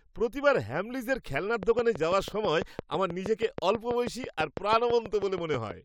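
A speech clip with a train of clicks from 1.63 s to 5.72 s, after "প্রতিবার হ্যামলিজের খেলনার": about thirty evenly spaced clicks at 6.13 per second, peaking around 10 dB above the speech, likely from nearby interference.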